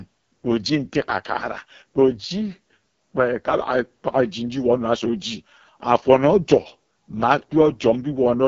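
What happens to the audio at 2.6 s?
At 2.6 s, as throughout the speech, the AMR wideband (HD Voice) codec is at work, likely at its lowest rate, around 6.6 kbit/s. The pulse-driven vocal tract model turns rough and raspy. Unlike narrowband telephony, content reaches about 7 kHz, topped with noise-like fill.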